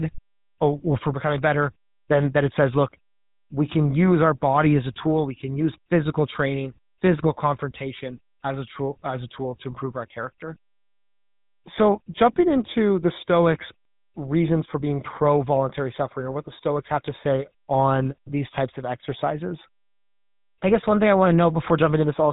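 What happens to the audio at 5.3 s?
At 5.3 s the speech sounds buzzy and gravelly with nothing above 3.8 kHz, from GSM full-rate codec damage throughout: a pulse-driven vocal-tract model at 13 kbps.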